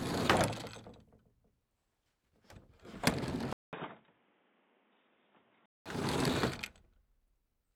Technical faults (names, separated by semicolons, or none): input switched to a poorer device